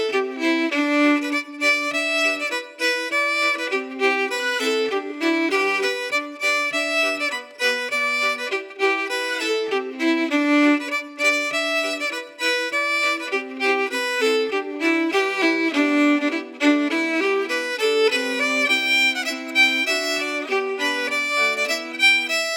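No technical faults can be heard anywhere in the audio; the signal stays continuous and steady throughout.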